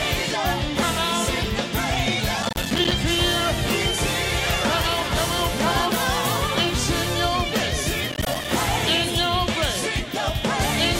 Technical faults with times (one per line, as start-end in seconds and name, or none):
2.43-2.91 processor overload crackle
8.12-8.45 processor overload crackle